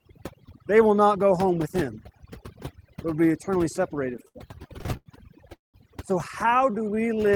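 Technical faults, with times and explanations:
Throughout: overdone noise removal. The suppressor was set so hard that any frequency band near its noise estimate is pulled right down, taking the quiet parts of the voice with it. The background drops and breaks up into twinkling specks. The damage stays in place the whole time rather than coming and going like a transmission fault.
4.13 to 5.08 s: repeated stalls (stutter). Right after "but will be eternally", packets kept arriving late, and the buffer ran dry 11 times. Each time the last sound was held and then released, filling about 246 ms with nothing lost, the longest hold 90 ms. The result is a dragging stutter of many short stops rather than one long gap.
5.55 to 5.76 s: call audio freeze. The sound stops and holds for about 190 ms, mostly silent, then resumes exactly where it left off, with nothing skipped. This is likely the jitter buffer running empty while packets were delayed. 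It is a single pause, unlike the repeated stalls before it.
6.58 to 7.32 s: jitter buffer slow-down. The receiver built up a reserve by repeating single pitch periods and small bits of pauses, adding 100 ms. The audio plays at about 87% speed with the pitch unchanged and sounds drawn out. There is no break, which sets it apart from the stalls and the freeze.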